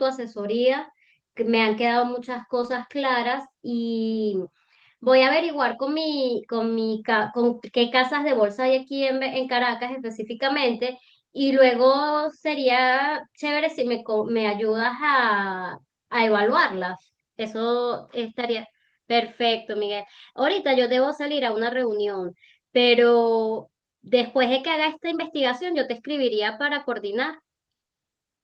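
Lost packet rebuilt from error correction at 2.63 to 2.77 s: the missing audio, about 80 ms, was filled from low-bitrate copies carried by the following packets, so there is no gap, just a brief rougher, noisier stretch against the Opus call path's 12 kHz bandwidth.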